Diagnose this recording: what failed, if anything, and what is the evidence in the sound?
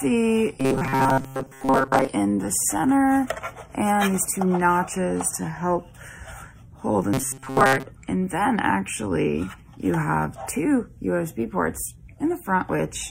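Robotic sound from repeated short buffers, at 0.6 to 2.08 s and 7.14 to 7.86 s: a rigid metallic buzz at 133 Hz, fitting a 7.5 ms block replayed over most of the real audio. Likely a starved driver or buffer stage looping its last block.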